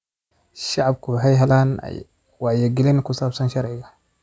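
No technical faults are audible.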